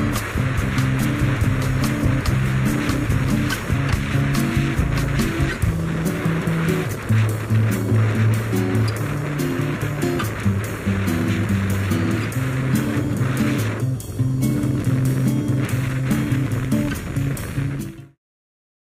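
Nothing stood out on listening, apart from the smooth fade-out that begins at roughly 17.5 s and finishes at 18.19 s.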